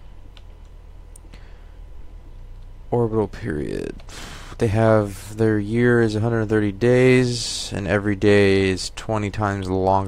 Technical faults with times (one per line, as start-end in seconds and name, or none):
none